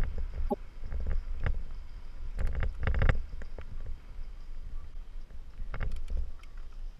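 Damaged data in a compressed stream corrupts frames, so the decoder loses sync and hunts for the next header, leaving brief glitches at 0.49–0.54 s, 3.07–3.13 s and 4.90–4.95 s.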